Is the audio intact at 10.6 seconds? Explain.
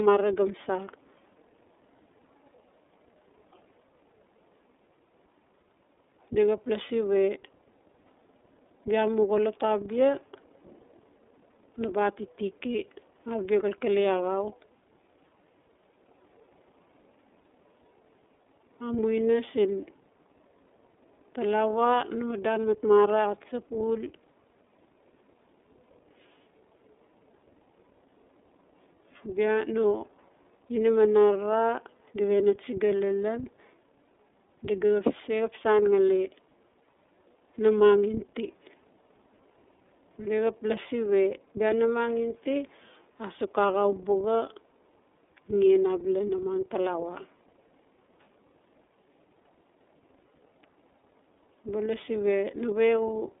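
No. At 10.6 s, as throughout, the speech sounds muffled, rough and synthetic, confined to 300 Hz–3.6 kHz: iLBC codec damage, coding each 30 ms frame independently.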